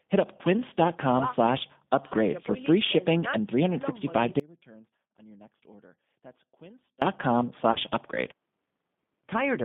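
Throughout, G.729 coding at 8 kbit/s gives rough, synthetic speech; a spectrogram shows energy confined to roughly 150 Hz–3.6 kHz with smeared harmonics. At 0.37–0.41 s, VoIP packet loss concealed by the speech codec covers 20 ms: a brief, decaying extension, seen as fading energy. From 4.40 to 7.02 s the speech collapses abruptly to a faint residue about 25 dB down, likely an audio dropout; the waveform shows a sharp-edged, near-flat stretch. At 7.72–7.78 s, a further 30 ms concealment repeats the dimming extension.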